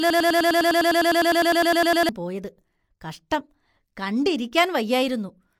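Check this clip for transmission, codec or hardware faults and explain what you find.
One fault is present. A broken-record loop runs from 0.0 s to 2.09 s and is already under way when the clip begins. A stalled player or stream likely kept resending its last fragment, so a 0.10 s piece of speech repeats twenty times as a rapid stutter. The speech due there is lost before "പോയത് കഷ്ടം".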